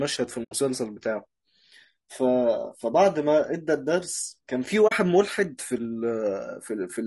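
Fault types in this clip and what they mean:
Low-delay AAC compression: The speech sounds rough and grainy throughout, with noise between harmonics. Likely a low-delay AAC codec at around 32 kbps, with very short frames.
AAC frame loss with muting: The sound fades to silence and back at 0.43 s, for about 80 ms, and at 4.87 s, for about 40 ms. These are soft-edged holes.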